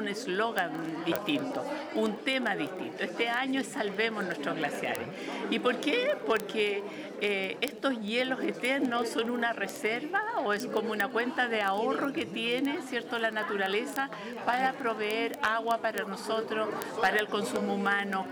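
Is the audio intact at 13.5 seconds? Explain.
No. Word clock ticks run from 0.11 s to 18.3 s, covering 13.5 s. The receiving device's clock isn't locked to the sender's, drifting by several hundred ppm, so a sample is dropped or repeated about every 30 ms, heard as sharp, uneven ticks.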